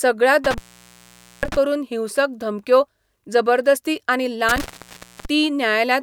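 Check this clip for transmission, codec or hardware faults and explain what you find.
Two intermittent contact dropouts appear in this speech clip, from 0.44 to 1.56 s and from 4.49 to 5.25 s. A loose connection opens the signal path for about 850 ms and then 640 ms, so the speech cuts out with crackle at each edge and faint hiss while the line is open.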